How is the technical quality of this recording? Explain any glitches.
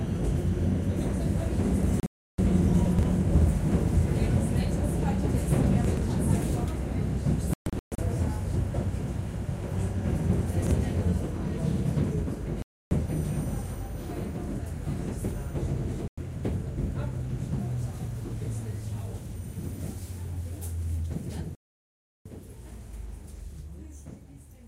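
The recording has repeated glitches of two kinds: muted gaps where audio is lost, and brief jumbled moments where short pieces play in the wrong order.

Digital broadcast dropouts occur at 2.00–2.39 s, 7.54–7.99 s, 12.62–12.92 s, 16.08–16.18 s and 21.55–22.26 s. The receiver loses the signal or rejects corrupted frames and mutes until good ones return. The sound cuts out, and whatever was sent during that time never comes back. The 2.00 s gap loses about 0.35 s of audio, mostly in one 0.32 s hole. At 7.54 s the losses are scattered as several short holes, the longest 0.13 s. At 21.55 s about 0.7 s goes silent.

Chunks out of order appear at 2.86–3.03 s, 5.85–6.02 s and 10.62–10.71 s. A roughly 43 ms piece of audio arrives late and plays after pieces that should follow it. It is three chunks late in the first two cases and one chunk late in the last. Nothing is missing, but the hard joins produce a garbled, jumbled moment.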